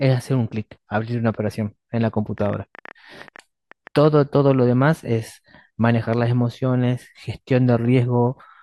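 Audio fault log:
2.38–4.06 s, train of clicks: about fifteen uneven ticks, near 9.6 per second, roughly as loud as the speech, likely from interference or a faulty connection.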